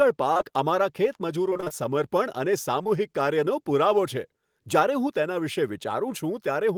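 Short concealed packet loss hits three times in quick succession, at 0.33 to 0.37 s, 0.37 to 0.52 s and 0.41 to 0.44 s, and again at 2.84 to 2.87 s. Each time about 20 ms of speech arrived too late. The receiver patched the gap by extending the last sound, then blended back. The second event also adds a little delay. Each one is heard as a brief smear or wobble.

Repeated packet loss (robotic sound) comes in between, from 1.50 to 1.72 s. The losses come again and again there, about six gaps of up to 20 ms each. Nearly half of that stretch is patched-in sound. It turns choppy, with bits of speech missing.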